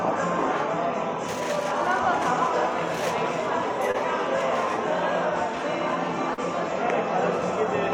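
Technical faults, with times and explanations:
3.91–3.96 s and 6.34–6.39 s: short concealed packet loss. About 20 ms and 40 ms of audio arrived too late, so the decoder extended the preceding sound across each gap before blending back, leaving a brief smear.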